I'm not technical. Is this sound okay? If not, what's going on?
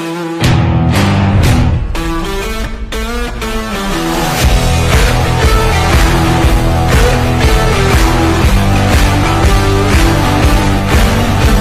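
No. Loud moments sound harsh and crackly throughout, because of hard clipping: the sound is too loud for the recording, so its peaks get chopped flat.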